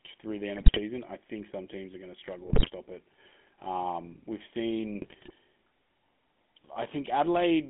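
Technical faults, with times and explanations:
Throughout: GSM full-rate codec. The speech is squeezed into a 200 Hz to 3.4 kHz telephone band at 13 kbps, and the coder rebuilds it from a vocal-tract filter driven by sparse, regularly spaced pulses. That decimated excitation gives the plainly audible buzzy, gravelly roughness.
0.56 to 0.79 s, 2.46 to 2.70 s, 5.02 to 5.31 s: GSM bit errors. Corrupted bits reach the decoder at roughly 2 to 4 percent, hitting the filter, pitch and gain parameters across a run of frames each time. The spectrum bends and the level jumps, so each burst breaks into squawks, pops and gargling.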